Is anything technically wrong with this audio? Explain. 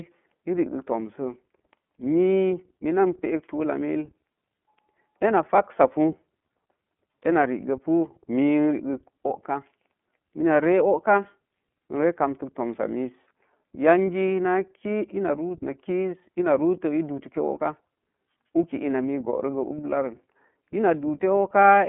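Yes. iLBC codec coding runs throughout the speech, and the damage is plainly audible. The codec works in 30 ms frames, coding each frame's excitation independently of the one before, and at a rate that fits the 13.33 kbps mode it leaves a slightly rough, synthetic edge on the voice. The band is telephone-narrow, roughly 200 Hz to 3.4 kHz, with nothing above 3.6 kHz, so sibilants and airy detail are gone and the sound is thin and boxed-in.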